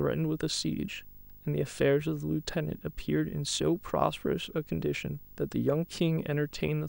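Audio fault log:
throughout: video or display buzz. A screen or video cable is leaking its scan signals into the audio path, so a buzz at the 50 Hz field rate sits under the speech, roughened by a spray of harmonic hash reaching up the spectrum. A thin, piercing tone at 15.6 kHz, the line rate, rides on top. The interference runs roughly 25 dB below the speech, steady enough to stay audible through pauses.
5.62 s: dropped samples. The stream has most likely lost a sample or so, about 0.02 ms, so the waveform leaps straight from one value to a later one with nothing joining them. That gap is far too brief to remove any of the speech, but the sudden step in the waveform spreads energy across every frequency at once. It is heard as a single sharp click and shows as a thin vertical line on a spectrogram.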